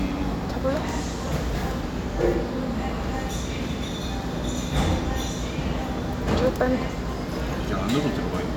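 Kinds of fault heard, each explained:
No technical fault can be heard anywhere in this recording of sounds.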